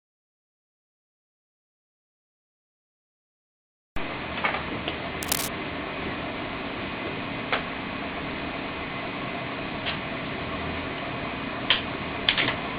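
From 5.23 to 5.49 s, cable scratch noise scrapes across the sound at about 10 dB below the signal. Its likely cause is a worn cable or connector carrying DC being moved, so its contact resistance jumps around. A spectrogram shows a dense, ragged broadband smear, and the waveform shows uneven, spiky fuzz.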